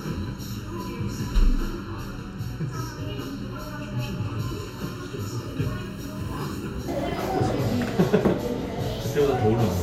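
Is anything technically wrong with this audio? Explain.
Yes. From 0 to 6.88 s the sound is hollow and phasey: channel delay comb filtering, one channel lagging by under a millisecond, cutting notches from around 700 Hz upward.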